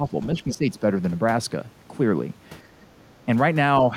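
From 0.0 to 0.14 s the speech dips by a few decibels, and from 0.35 to 0.64 s it drops more deeply, around 10 dB. This is likely speech suppressed in double talk: an echo canceller, hearing both ends at once, mistook the talker for loudspeaker echo and turned it down. Unlike gain pumping, the dips are brief.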